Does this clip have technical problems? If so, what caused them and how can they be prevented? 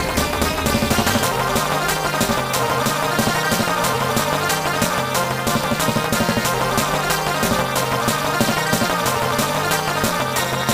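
Yes. Overlap-add ripple runs through the whole clip. The audio was split into windowed frames and rejoined with an overlap whose windows don't sum to a constant gain, so the level swings by about 60 dB once per frame, around 300 times a second. That produces a metallic buzz with extra tones around each note. Unlike a deliberate tremolo, the pulsing is too fast to hear as separate beats. Unlike mains hum, it modulates the sound itself rather than adding a tone. To prevent it, pair the analysis and synthesis windows with a hop size that satisfies the constant-overlap-add condition, such as a Hann window at 50% or 75% overlap.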